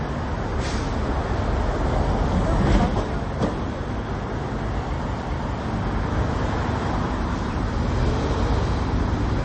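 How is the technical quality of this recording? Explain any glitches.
The quality is poor, with plainly audible damage from start to finish. The sound is dull and watery, with nothing above 8.3 kHz and swirling where weak detail flickers in and out. This is likely MP3 compression at a low bitrate, consistent with about 32 kbps, where the encoder cuts treble and drops quiet components to save bits.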